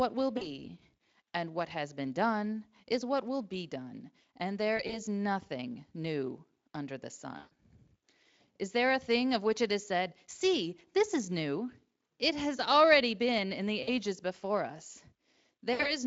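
Short buzzy smears that fade out and leave the sound thin for a moment afterward occur at 0.37 s, at 4.77 s after "be done and there", at 7.37 s after "nothing new under the", at 13.83 s before "before us", and at 15.73 s. This is VoIP packet loss concealed by the speech codec: the Speex decoder, whose coding is light, extrapolates its last pitch and filter across gaps of 20 to 140 ms.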